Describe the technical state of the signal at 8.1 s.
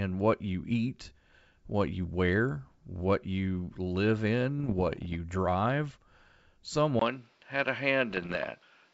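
At 8.1 s the signal is carrying two faults at once. The first is most likely an input switched to a poorer device: from 6.99 s to the end of the clip the recording comes from a narrower-band microphone or headset path. Nothing is left above 6.3 kHz, so the sound is duller and boxier than before. A new background noise floor sits about 40 dB under the signal, the level stays roughly the same, and a short gap of about 20 ms marks the changeover.

The second is bit errors on an ADPCM link, starting at 8.11 s and running to 8.49 s. Flipped bits, at a rate somewhat under one percent, corrupt the coded stream. Each error also throws off the decoder's step size and predictor, so the damage carries on for a few milliseconds rather than staying on one sample. This is heard as a cluster of pops and rough, gritty bursts with brief jumps in level, laid over the already dulled sound.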